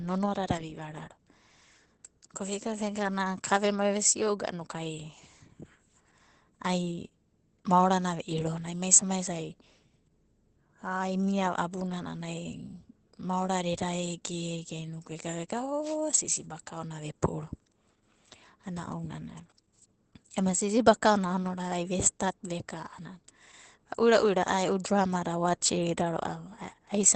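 From start to finish the speech carries Opus voice compression at a low rate. The muffled, slightly hoarse, faintly robotic quality and nothing above about 8.8 kHz point to the SILK linear-prediction coder running wideband at around 12 kbps, coarsely coding the excitation, and the damage is plainly audible.

Then at 15.82 s there's a wireless microphone noise hit lasting about 0.16 s, to 15.97 s. It's a quick swish of static where the radio signal faded out, probably from reflections cancelling, and receiver noise rushed up.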